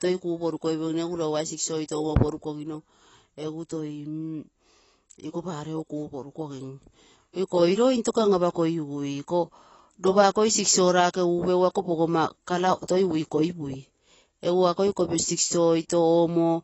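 Throughout the recording, the speech has most likely passed through AAC compression at a low bitrate, with the encoder discarding everything above 7.9 kHz. The sound fits AAC-LC at around 24 kbps. With so few bits, the coder starves the finer spectral detail, so the speech comes across dull and smeared. The damage is plainly audible, with a fizzy, warbling texture on sibilants and held sounds where the quantisation cannot keep up.

From 0.12 s to 16.61 s, clock slip clicks run under the speech, likely from two devices running on unsynchronised clocks that disagree by a few hundred parts per million. Each time the drift accumulates to a full sample, one sample is dropped or repeated, roughly every twentieth of a second and hundreds of times across the clip. At that rate, the ticks merge into a soft, steady rattle that is most noticeable on loud, sustained speech.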